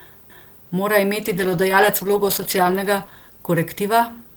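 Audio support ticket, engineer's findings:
Call bitrate drop from 1.2 s to the end. Speech goes muffled and watery as the top end disappears, and the coarseness bottoms out for about 1.4 s. Encoder component: the bandwidth estimate crashed and Opus got squeezed, sounding like around 64 kbps falling to roughly 15 kbps. At that rate it quantises harder and band-limits the highs. No recovery before the clip ends.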